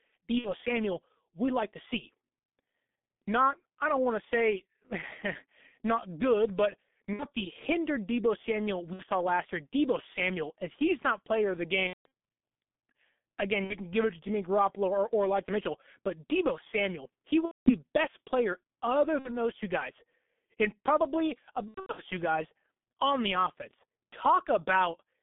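Speech squeezed through the G.723.1 codec the whole way: nothing outside roughly 200 Hz to 3.6 kHz, so it's muffled and hoarse with smeared consonants, and the heavy damage points to the low 6.3 kbit/s mode with its slow 30 ms frames. On top of that there's VoIP packet loss concealed by the speech codec at 0.38, 7.13 (after "not good but", before "the hindered"), 8.93, 11.87, 13.64, 17.45 (before "best player other"), 19.19 (after "best player other", before "those two guys and") and 21.68 s. Each time the decoder fills the gap from its last pitch and filter and turns it down, so you get a buzzy, fading stretch. Most gaps are about 60 ms, fitting two dropped frames. At 11.87 and 17.45 s it's about 210 ms, and at 21.68 s about 240 ms scattered over 0.3 s, with the sound staying weak a bit after each one.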